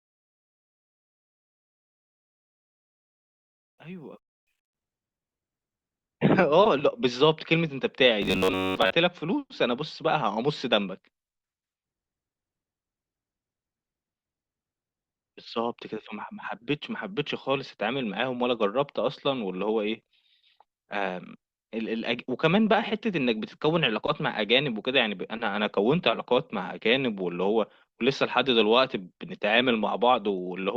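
Robotic sound from repeated short buffers appears from 8.22 to 8.93 s. The sound becomes a rigid, metallic buzz at about 94 Hz, most likely from roughly 10.7 ms chunks being looped while most of the real audio is skipped. A spectrogram would show evenly spaced harmonic stripes, and the waveform would show identical repeating cycles.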